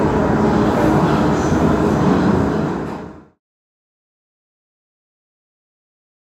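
Nothing technically wrong can be heard in this recording of sounds. From around the 2-second mark the level eases smoothly down in a fade-out that is complete by 3.41 s, with no click or hard edge at its end.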